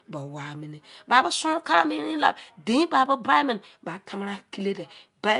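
A speech clip with Nellymoser compression damage running from start to finish: a rough, hissy halo around the voice and a smeared, underwater texture, with nothing above 10.6 kHz. The sound likely comes from the old Flash Nellymoser Asao codec, which fits roughly 44 kbps, where weak bands receive no bits and are replaced with noise.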